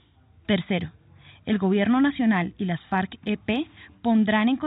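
There are no technical faults to describe in this speech; the sound arrives through an ordinary G.711 call path with nothing above 4 kHz.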